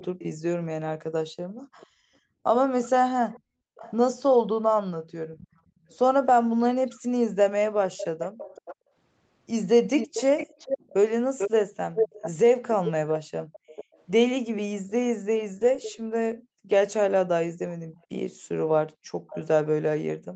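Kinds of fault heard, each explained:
Echo leak: a delayed copy of the speech trails roughly 440 to 520 ms behind, about 10 to 25 dB down, likely loudspeaker sound the far-end canceller missed.
Background gated by the echo canceller: the room tone dips by about 40 dB while the loudspeaker plays, then comes back once the canceller lets go.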